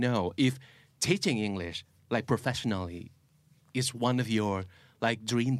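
No technical faults can be heard anywhere in this speech recording.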